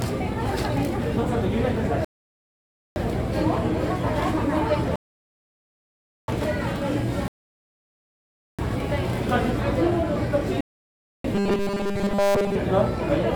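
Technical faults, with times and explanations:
2.05–2.96 s, 4.96–6.28 s, 7.28–8.59 s and 10.61–11.24 s, rebuffering stall: the player runs dry and the sound drops to silence, then picks up exactly where it stopped. Nothing goes missing, but each gap adds dead time, from about 0.64 s up to 1.32 s.
11.35–12.56 s, robotic sound from repeated short buffers: the sound collapses into a rigid, metallic buzz at a steady 200 Hz while still loosely tracking the original. This is likely from new audio arriving too slowly, so a 5 ms slice is looped over and over in place of the real material, which gets skipped.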